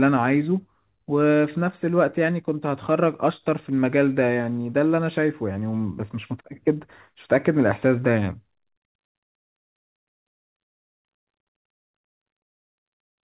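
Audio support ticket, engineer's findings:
No faults found in this speech.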